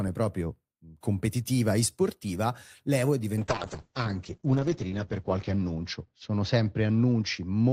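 At 3.39 s the speech suffers a call bitrate drop that lasts to the end of the clip. The encoder's budget falls from 40 kbps to 8 kbps, bottoming out for about 1.7 s, so Opus codes far more coarsely and narrows its bandwidth from 20 kHz to 8 kHz. The voice turns muffled and rough. On a spectrogram, energy above 8 kHz vanishes and the remaining bands look blotchy. The waveform envelope barely changes.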